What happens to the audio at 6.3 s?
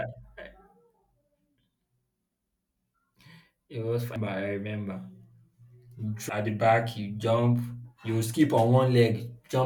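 At 6.30 s the speech jumps abruptly forward, just before "at the back". This is compressed frames skipped: roughly seven frames of about 92.9 ms each, around 0.7 s of audio, never play because they were lost or rejected as damaged.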